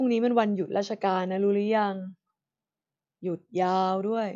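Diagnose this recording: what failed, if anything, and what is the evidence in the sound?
Nothing failed: no stage in the chain, from capture through to playback, leaves an audible fault in the speech.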